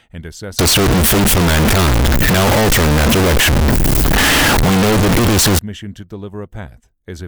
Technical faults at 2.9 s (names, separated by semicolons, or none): float read as integer